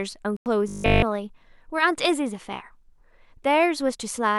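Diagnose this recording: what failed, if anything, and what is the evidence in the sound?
Silence from 0.37 to 0.46 s, about 93 ms, likely a Bluetooth dropout in the wireless link, fitting roughly seven lost packets. The sound resumes past the gap rather than stalling.

From 0.68 to 1.04 s the speech becomes a rigid 50 Hz metallic buzz, likely robotic sound from repeated short buffers in the playback driver, fitting a 20 ms buffer looped throughout.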